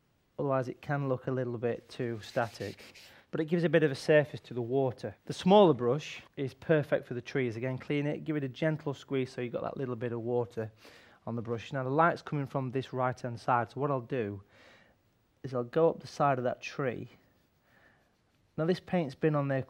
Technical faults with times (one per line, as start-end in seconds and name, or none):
none